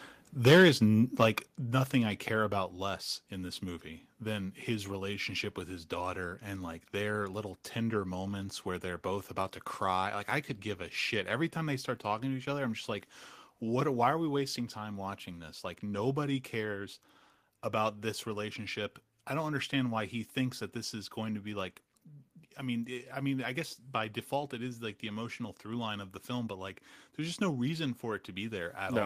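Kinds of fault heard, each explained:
microphone volume stepped down: at 1.47 s, speech and background drop together by about 5 dB in one abrupt step, likely an input-volume cut, not a gradual fade.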